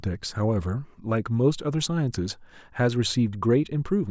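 No technical faults can be heard in this speech.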